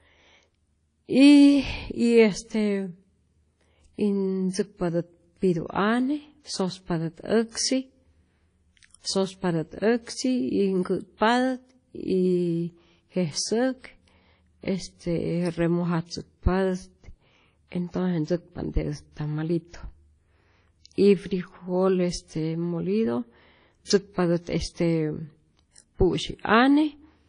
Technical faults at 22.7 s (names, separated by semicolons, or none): WMA compression